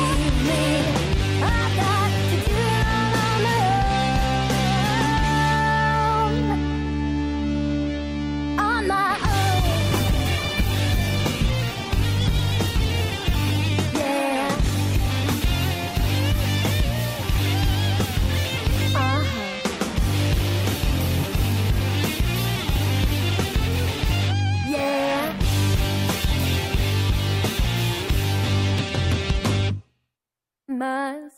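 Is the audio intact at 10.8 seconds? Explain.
No, 10.8 s falls inside a call bitrate drop from 9.67 to 15.95 s. The bandwidth estimate fell, so the encoder coded far more coarsely, with dullness and a muffled top that fits a drop from about 96 to 13 kbps and stays worst for about 3.5 s. Unlike packet loss, there are no gaps or clicks.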